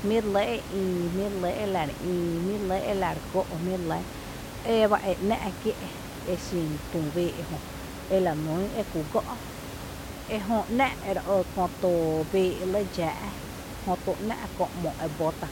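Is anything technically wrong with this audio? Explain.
No, nothing's technically wrong here; the only extra sound is the room's own background noise sitting about 11 dB under the speech, and that's simply part of the recording.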